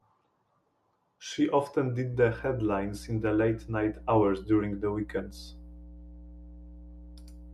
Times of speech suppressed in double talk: none

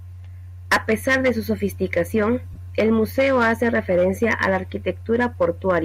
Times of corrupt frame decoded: 2.53-2.58

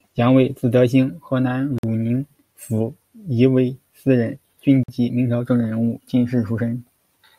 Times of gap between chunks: 1.78-1.83, 4.83-4.88

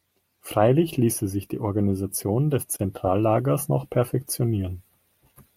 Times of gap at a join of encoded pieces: 2.76-2.79

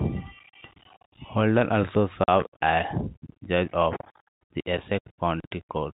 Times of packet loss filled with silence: 2.24-2.28

